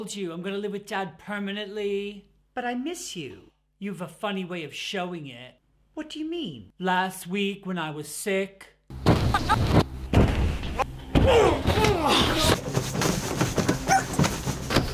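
Nothing here needs fixing: the audio comes through fine, with no technical faults to point to at any moment.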